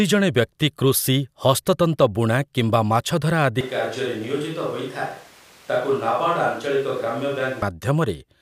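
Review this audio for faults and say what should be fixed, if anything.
From 3.61 s to 7.62 s the close microphone's signal likely dropped out, forcing a switch to a distant microphone. The speech turns abruptly roomy and hollow, loses bass, falls roughly 5 dB, and room noise rises to about 25 dB below the speech. Monitoring the close microphone's feed live, with a backup recorder on it, would prevent this.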